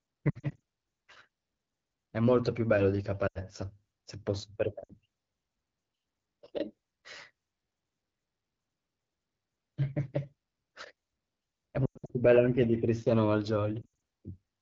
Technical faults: AMR wideband (HD Voice) codec; lost AMR speech frames

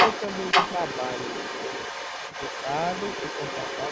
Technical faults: other side's voice leaking through; speech suppressed in double talk

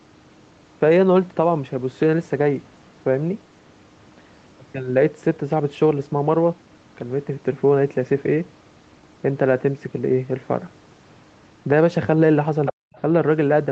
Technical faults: other side's voice leaking through; speech suppressed in double talk

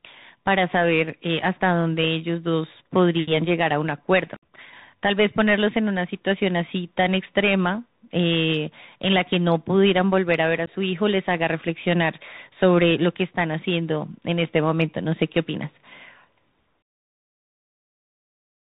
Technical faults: Bluetooth CVSD headset codec; unconcealed Bluetooth headset packet loss

